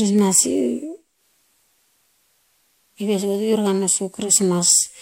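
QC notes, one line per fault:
1.10–4.37 s, digital radio blending to analogue: the receiver lost its digital stream and cross-faded over about 151 ms to the station's FM broadcast, then faded back. The speech drops by about 4 dB and picks up a steady hiss roughly 40 dB below it. On a spectrogram a faint noise floor fills the band. The waveform shows a lower envelope between two short ramps.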